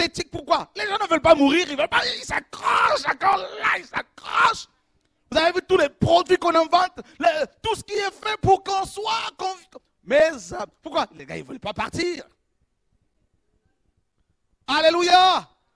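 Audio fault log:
No faults detected.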